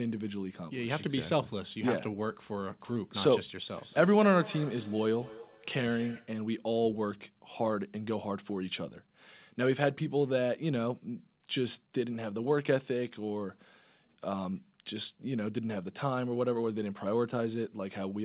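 From 3.66 to 6.43 s, feedback echo between two devices recaptures played-back sound, so speech returns roughly every fifth of a second, thin and ringing, about 16 dB down.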